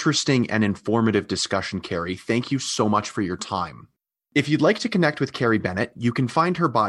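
No technical fault can be heard anywhere in this speech recording, from its opening moment to its final one.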